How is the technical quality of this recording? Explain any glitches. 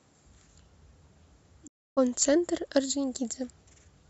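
The recording has one clear glitch, a digital broadcast dropout. At 1.66 s the speech fades out over about 20 ms and goes completely silent, returning at 1.99 s. What was said across that gap is simply missing, not muffled. The receiver stopped getting usable data, either because the signal was lost or because frames failed their error check, so it muted its output until valid frames arrived again. The roughly 0.3 s hole is consistent with a run of several consecutive corrupted frames.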